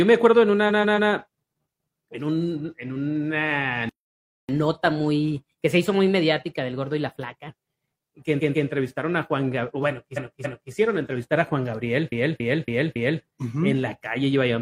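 The audio has repeated frames in four places, where a chunk of the compressed stream got played again and the sound stutters. From 0.65 to 1.07 s a 139 ms block comes round three extra times, and from 8.36 to 8.64 s the same size block repeats twice more. From 10.13 to 10.68 s a 279 ms block plays twice more, and from 12.08 to 13.19 s a 279 ms block plays four extra times. At 3.89 s the sound just stops dead for about 0.6 s, until 4.49 s, then carries on. That's a playback stall, likely the player running dry of data or its thread getting blocked. Right after it, from 4.49 to 7.49 s, there's catch-up at higher speed. Everything runs at 1.1 times normal speed and sits roughly a semitone and a half sharp while the player works off the backlog, then drops back to normal.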